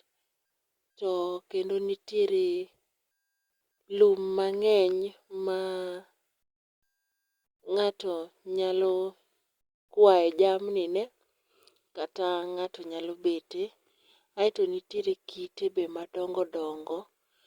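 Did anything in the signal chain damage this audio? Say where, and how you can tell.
Yes. The damage comes from the network and codec stage: an adaptive stream switched to a lower bitrate at 14.96 s and stays there to the end of the speech. There is no gap at the switch, only a sudden step down in quality. The top end still reaches about 20.3 kHz, so the bandwidth is barely narrowed, but there are more codec artefacts. That fits an Opus stream falling from about 64 to 32 kbit/s when the connection slowed.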